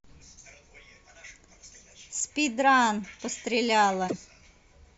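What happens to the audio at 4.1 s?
At 4.1 s the speech is hit by damaged data in a compressed stream, from 4.04 to 4.13 s. Corrupted bytes make the decoder misread those frames and lose sync until it finds the next valid frame header, producing a brief chirp or squawk.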